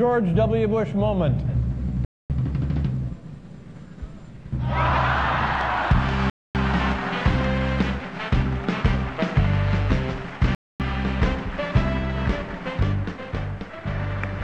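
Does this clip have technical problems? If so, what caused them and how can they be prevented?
Yes. Gaps between chunks occur at 2.05–2.30 s, 6.30–6.55 s and 10.55–10.80 s. Each is a 250 ms silence, separating the 4 s blocks of sound. The audio was handled in 4-second chunks, and dead air was inserted at each join instead of the blocks running straight on. To prevent this, strip any codec padding and schedule each chunk to start exactly where the previous one ends.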